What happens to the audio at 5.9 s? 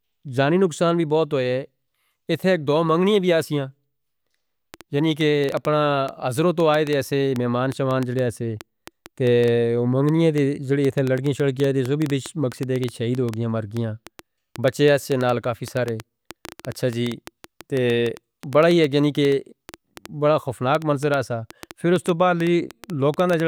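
At 5.9 s a train of clicks is under way, running from 4.74 to 23.41 s: around a hundred same-shaped ticks, about 5.7 per second at uneven spacing, peaking about 10 dB above the speech, likely from interference. Unlike random crackle, they keep one shape and persist through pauses.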